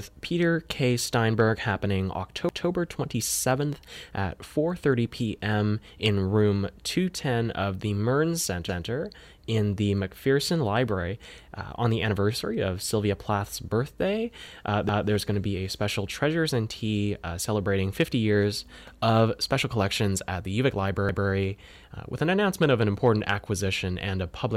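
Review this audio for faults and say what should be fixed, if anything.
Overlapping chunks cause a stutter at 2.49–2.69 s, 8.69–8.89 s (just before "in the"), 14.89–15.09 s (just before "going to be a") and 21.09–21.29 s. The speech was handled in 6 s chunks, each starting 200 ms before the previous one ended, so that slice plays twice at every join. Unlike a dropout, nothing is missing: the same audio repeats, at a steady six-second rhythm. Trim or crossfade the overlap when joining chunks.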